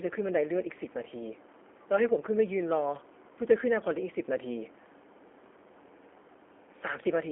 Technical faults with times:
0.00-7.31 G.729 codec

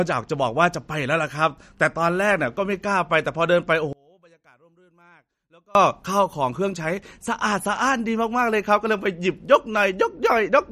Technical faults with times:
0.00-10.71 MP3 compression
3.93-5.75 one channel inverted

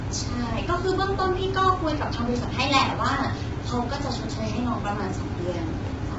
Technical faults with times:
0.00-6.18 low-delay AAC compression

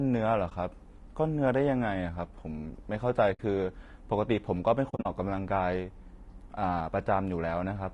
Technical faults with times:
0.00-7.94 low-delay AAC compression
0.49-0.52 AAC frame loss with muting
3.33-3.40 AAC frame loss with muting
4.89-5.06 AAC frame loss with muting

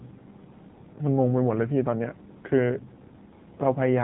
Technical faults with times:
0.00-4.03 AMR narrowband mobile codec

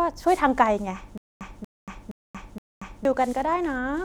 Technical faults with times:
1.18-3.05 stutter with silent gaps

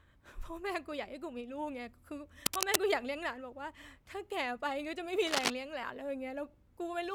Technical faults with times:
2.46-2.76 cable scratch noise
5.26-5.51 cable scratch noise

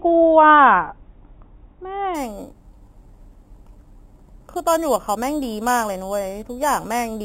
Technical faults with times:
2.15-7.24 imaging from sample-and-hold upsampling

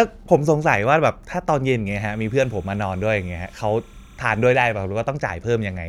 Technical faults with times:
1.91-4.72 timecode bleed

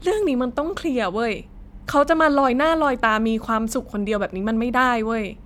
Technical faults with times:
none

